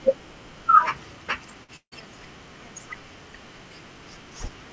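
At 1.64 to 1.71 s, a short concealed packet loss leaves a brief smear where about 44 ms was patched from the previous sound. On a spectrogram, the energy carries on briefly, then rejoins.

From 1.76 to 1.95 s, the sound becomes a fading buzz or hiss, then about 80 ms of silence, likely a long network dropout. The spectrogram shows smeared energy thinning into a blank gap, all under the call codec's 8 kHz ceiling.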